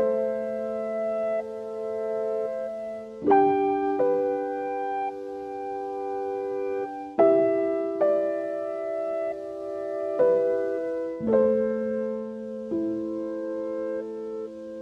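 No technical faults can be heard anywhere in the recording; the signal stays continuous and steady throughout.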